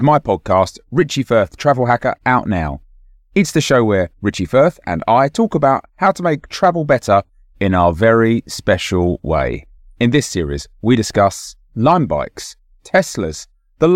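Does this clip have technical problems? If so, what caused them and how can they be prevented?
No, there are no technical problems to point to in this speech recording. Nothing calls for a cause to be traced or a fix to be applied.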